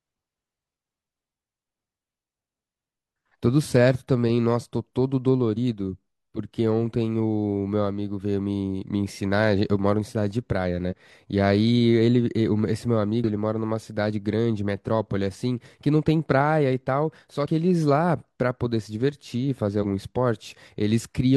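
Damaged data in a compressed stream hits this speech five times. Corrupted bytes in the coded file leave the decoder misreading frames and hunting for the next valid header, so each spot breaks into a short chirp or blip: 5.53 to 5.58 s, 10.87 to 10.94 s, a single tick at 13.24 s, 17.42 to 17.47 s, and 19.79 to 19.85 s. The other four disruptions last only about 50 to 65 ms before decoding recovers.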